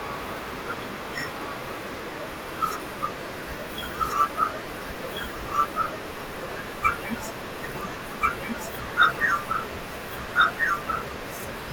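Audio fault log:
throughout, doubled audio track: likely a slower second capture path mixing the speech in again, so a dry copy, about equally loud, trails roughly one and a half seconds behind.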